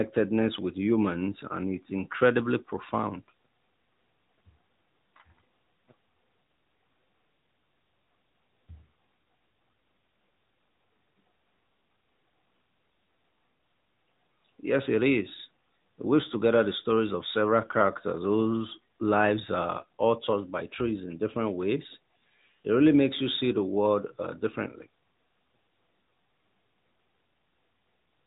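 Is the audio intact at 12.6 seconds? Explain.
No. At 12.6 s, as across the whole recording, the speech carries AMR narrowband mobile codec damage. This phone codec samples at 8 kHz and rebuilds the voice from a vocal-tract model fed by sparse pulses in 20 ms frames, so nothing above 3.8 kHz survives and the voice sounds muffled, buzzy and plainly synthetic, which fits a mid-rate mode around 10 kbps. A spectrogram shows a hard ceiling at 3.8 kHz with empty space above it.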